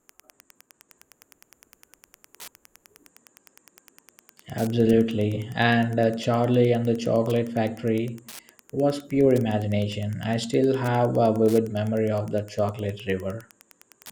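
From start to finish the speech carries Wi-Fi interference: a nearby Wi-Fi radio is being picked up and rectified by the audio circuit, so its beacon, sent every 102.4 ms, becomes a steady tick close to ten times a second, sitting roughly 30 dB below the speech. That slow, even clock separates it from mobile-phone interference, whose bursts repeat at around 217 Hz and merge into a buzzing chatter rather than distinct ticks.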